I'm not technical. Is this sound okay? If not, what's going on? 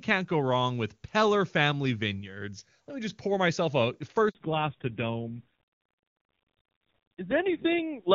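No. At 4.29 s, right after "just pour myself a", the phone switched networks and no sound arrived for 60 ms. This handover gap cuts the voice to brief silence, losing whatever was said then. From 4.35 s to the end, the call falls back to narrowband from its clear HD Voice. Everything above 4 kHz disappears, so the voice sounds duller and rougher.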